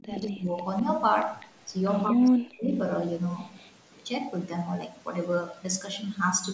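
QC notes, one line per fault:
0.00–0.55 s and 2.10–2.71 s, speech suppressed in double talk: the speech sinks and breaks into pieces for about half a second at the start and about 0.7 s later. The dip reaches roughly 25 dB in the first stretch and roughly 40 dB in the second. The likely cause is the far side talking at the same time: the echo canceller could not tell the near talker from loudspeaker echo and turned everything down.
0.33, 1.40 and 3.56–3.70 s, echo leak: brief, faint repeats of the speech arrive about 0.2 s behind the original. They sit about 20 dB below the speech at 0.33 s, about 30 dB below at 1.40 s and about 35 dB below at 3.56 s, and each is a short scrap. The likely cause is a loudspeaker on the other end whose echo canceller let part of its microphone pickup through, which was then sent back down the call.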